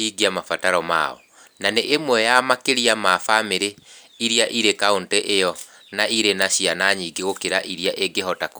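No technical faults are audible in this recording.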